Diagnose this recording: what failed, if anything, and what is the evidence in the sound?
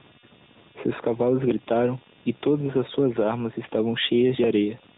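Computer activity noise enters at the analogue wiring stage and runs through the whole speech clip as a faint buzz pulsing at roughly 200 Hz, far below the speech. Processor or peripheral load currents are modulating the shared audio ground. Unlike mains hum, its rate isn't 50 or 60 Hz, and it follows the machine's activity rather than the signal.

The AMR narrowband mobile codec has done plainly audible damage from start to finish. Nothing passes above 3.8 kHz, and the speech sounds buzzy and synthetic, which fits the 10.2 kbps AMR-NB mode. Its pulse-driven vocal-tract model is rebuilding the speech. A plain low-pass filter would dull the top without adding this synthetic texture.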